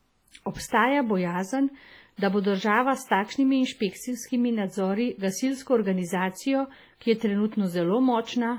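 From start to finish the speech rings and sounds washy. A hiss rises and falls with the talker. Weak detail drops out entirely. The damage is heavy, which fits a low bitrate near 24 kbps. This is likely WMA compression, a transform codec.

At 2.17 to 2.22 s, just before "da bo država s", a short hiss comes before the attack. That is pre-echo. Quantisation noise sized for the loud onset fills the quiet 51 ms ahead of it. The attack sounds soft and smeared.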